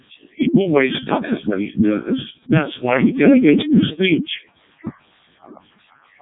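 Speech throughout, heavily damaged by the Codec 2 vocoder: robotic, buzzy sine-wave resynthesis fitting its 0.7 kbit/s mode, with the spectrogram showing nothing above 3.7 kHz.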